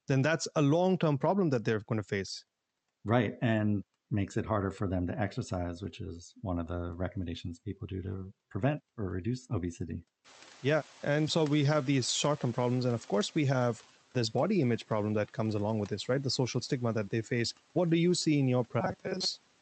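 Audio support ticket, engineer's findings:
Noise suppressor catching up, 10.24–13.86 s. Room noise jumps about 18 dB near 10 s and the suppressor's noise estimate lags for roughly 3.6 s. Background noise comes through under-reduced at first, then sinks by about 7 dB as the estimate adapts.

Robotic sound from repeated short buffers, 18.80–19.25 s. Likely jitter-buffer underrun: audio arriving too seldom, the last few milliseconds replayed in place of most of the real signal. Fixed buzz at 188 Hz, which fits a repeated segment of about 5.3 ms. Metallic, rigid tone.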